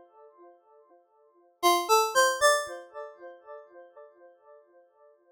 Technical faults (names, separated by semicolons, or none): damaged data in a compressed stream